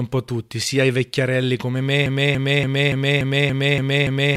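At 2.06 s, right after "sia i vecchiarelli come", the speech falls into a broken-record loop. A fragment of about 0.29 s repeats exactly, back to back, eight times. It runs to the end of the clip. There are no gaps between repeats, so it sounds like a mechanical stutter. The likely cause is a stalled player, encoder or stream that kept resending its last held fragment. The speech that should have followed is lost.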